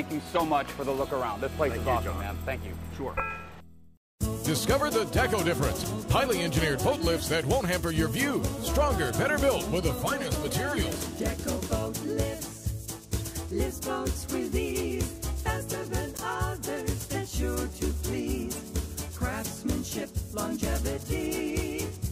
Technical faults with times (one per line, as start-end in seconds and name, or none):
0.35 corrupt frame decoded
16.15-16.20 corrupt frame decoded
18.56-18.59 corrupt frame decoded